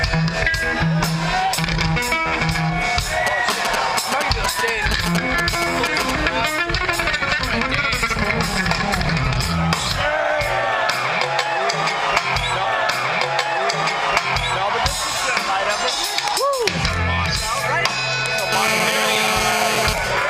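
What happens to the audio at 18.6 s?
At 18.6 s you're inside a burst of GSM phone buzz that runs from 18.52 to 19.93 s. A nearby 2G phone on a call pulses its transmitter about 217 times a second, the audio circuitry rectifies those pulses, and you get a raspy 217 Hz buzz, rich in harmonics, sitting about 2 dB below the audio.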